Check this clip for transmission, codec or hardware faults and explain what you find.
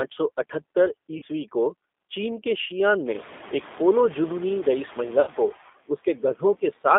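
Yes, there are several: a speech codec running through the whole clip, noise suppression working on it throughout, two short dropouts patched over by the decoder, and one stretch where the suppressor eats into the speech itself.

The noise suppressor artifacts run the full length of the clip. Background noise dips between phrases and creeps back under the speech. That pumping is the suppressor estimating which frequency bands hold stationary noise and pulling them down frame by frame, by about 13 dB here. It has more to work against after roughly 3 s, where the room noise rises by about 18 dB and sits about 20 dB below the speech.

The G.729 codec colours everything. The speech is clearly intelligible but roughened and slightly synthetic, with a boxy, telephone-narrow tone. The passband is confined to about 250 Hz to 3.6 kHz, and the grain points to a low-rate model-based coder around 8 kbit/s, consistent with G.729A. 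Rather than sending the waveform, the codec reconstructs speech from a vocal tract filter, a pitch predictor and a handful of pulses per frame. At this rate, that loss of fine detail is plainly audible.

VoIP packet loss concealed by the speech codec occurs twice, from 1.18 to 1.24 s and from 5.21 to 5.30 s. Each time, the speech is briefly stretched into a sound that fades in level. These are gaps of about 40 ms and 60 ms, which fits two and three 20 ms packets going missing. The decoder filled each hole by repeating its last pitch and filter settings with falling gain. Because every frame builds on the previous one, the sound stays weak and blurred just after each gap.

Speech cut by the noise suppressor affects the span from 5.88 to 6.4 s. Parts of the speech there sound swallowed, with soft sounds and word edges dropping out, by about 14 dB at worst. Roughly a sixth of a second in total is affected. 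The suppressor misjudged those quiet speech components as part of the background noise it was removing and attenuated them along with it.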